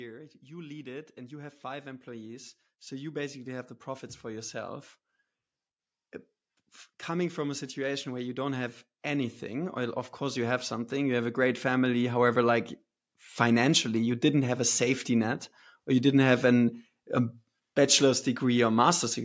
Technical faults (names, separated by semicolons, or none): automatic gain rising